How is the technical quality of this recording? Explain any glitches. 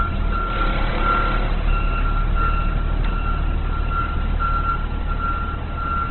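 Technical quality is poor, with heavy codec damage throughout. From start to finish the audio is band-limited, with nothing above 4.2 kHz, and tonal parts sound noisy, rough and grainy rather than swirling. This is likely Opus compression in its CELT music mode at a very low rate, consistent with about 12 kbps. Starved of bits, the encoder keeps each band's energy but fills the detail with folded or noise content, and narrows the bandwidth to narrowband.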